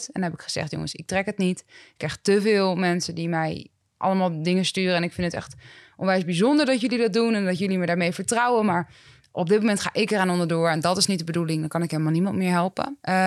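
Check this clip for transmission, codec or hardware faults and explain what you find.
One transmission fault is present: pre-emphasis left on, from 10.19 s to 13.27 s, running to the end of the speech. The sound turns thin, bright and hissy, with sharpened sibilants. A treble boost, consistent with a 50 µs FM curve, was never undone by de-emphasis, leaving 10 kHz about 10 dB hotter relative to 1 kHz.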